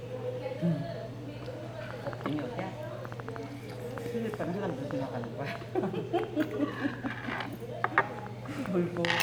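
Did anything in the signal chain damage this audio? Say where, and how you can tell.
Yes. A train of clicks runs from 1.9 s to 9.2 s: around thirty sharp, similar pulses at an uneven pace of about 3.7 per second, peaking well above the sound and audible in the gaps too. The cause is likely interference coupling into the analogue wiring from nearby equipment.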